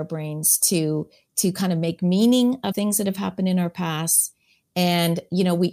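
From 2.71 to 2.73 s, compressed frames are skipped: roughly 70 ms of speech jumps away, leaving no silent gap.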